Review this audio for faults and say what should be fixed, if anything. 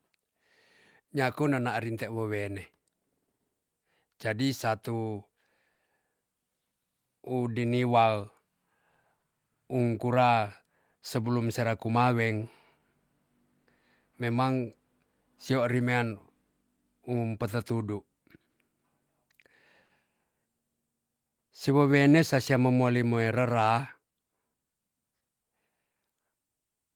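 Clock drift between sender and receiver runs through the whole clip. The sender's clock is slower than the receiver's by roughly 3 percent, so the jitter buffer keeps draining and playout has to be stretched to stay in step. Fix: lock both ends to a common reference clock, or resample at the receiver against the measured drift rate.

Repeated timing corrections occur from 0.09 to 17.91 s, where playback runs at 98 percent speed and adds roughly 0.3 s, and from 21.29 to 26.77 s, at 97 percent, adding about 0.15 s. Each edit is small and they are unevenly spaced. Fix: apply the correction as smooth continuous resampling rather than discrete stretch edits.

Short stalls from a late packet occur at 1.04, 5.74, 9.18, 13.63, 18.50 and 19.86 s, each about 0.07 s long. Each time the buffer ran empty, and the last sound was held for 40 ms before the speech resumed. Nothing is lost, but delay rises 40 ms each time. 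Fix: give the jitter buffer more headroom so a slow sender cannot empty it.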